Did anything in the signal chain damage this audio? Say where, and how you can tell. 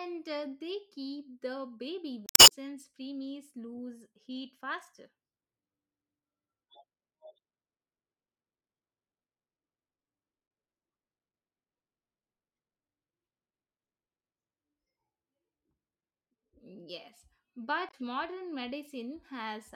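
Yes, it's damaged data in a compressed stream, so the codec/storage stage. Right after "they keep the baby" (2.26–2.52 s), then at 10.47–10.50 s and 17.86–17.94 s, you hear garbled blips where corrupted bytes threw the decoder off sync until it found the next frame header.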